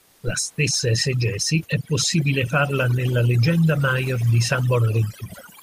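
From 0.00 to 0.23 s the opening background is steady and featureless, about 1 dB quieter than what follows, sitting roughly 39 dB below the loudest sound. This is comfort noise in place of the background, likely from discontinuous transmission such as Opus DTX, where the receiver synthesises noise during a pause instead of passing the real room detail.

Throughout the clip there is overdone noise removal. The room noise, about 37 dB below the speech, has been pushed down and broken up into twinkling specks, while quieter parts of the speech are thinned along with it.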